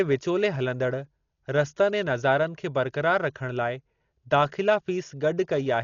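Throughout the speech nothing sits above 6.9 kHz, and tones carry a rough, fluttering noise. This is likely heavy Dolby Digital compression, which fits a bitrate near 40 kbps. The encoder narrowed the band and left many frequency lines unfunded, and the decoder filled them with dither noise.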